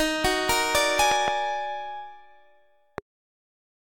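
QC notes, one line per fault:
1.12–1.30 s, loud pop: a sudden voltage step, likely from a plug, switch or static discharge, lands on the signal twice, and the following circuitry shapes each step into a short pulse. The result is a double pop, peaking around 20 dB above the audio, with the sound carrying on underneath.
2.98–3.00 s, loud pop: a single electrical pulse of the same kind is added to the signal, heard as one sharp pop roughly 15 dB above the surrounding sound.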